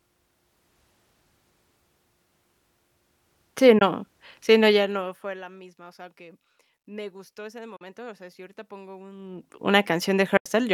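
At 3.79 s the speech cuts to silence for about 20 ms and resumes as though it had kept playing. This is a Bluetooth dropout, likely caused by one wireless audio packet arriving too late at the headphones and being discarded.

From 4.71 to 5.46 s a fine ticking rides on the speech as the level falls by roughly 20 dB. This zipper noise comes from the gain moving in unsmoothed 1 dB steps, around 40 per second, each step leaving a small click.

Two more Bluetooth dropouts follow, each a silence after which the sound carries on. The gap at 7.76 to 7.81 s lasts about 40 ms, which suggests two packets lost. The one at 10.37 to 10.46 s lasts about 80 ms, pointing to four.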